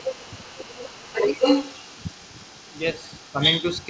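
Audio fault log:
Throughout, other side's voice leaking through: a second voice runs under the talker, only a few dB quieter, likely because the echo canceller left loudspeaker playback in the microphone. A spectrogram shows overlapping harmonic patterns from two voices, all stopping near 8 kHz.
0.52–0.59 s, speech suppressed in double talk: the talker's level briefly sinks by about 10 dB for roughly 70 ms, likely the canceller ducking everything while both sides spoke. The waveform shows a short notch in the envelope, and the spectrogram a faint vertical gap.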